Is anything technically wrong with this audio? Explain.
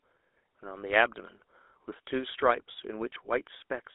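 Yes. GSM full-rate codec damage runs throughout this speech. The pulse-driven vocal-tract model gives a buzzy, gravelly roughness consistent with 13 kbps, and the spectrogram shows energy confined to roughly 300 Hz to 3.6 kHz.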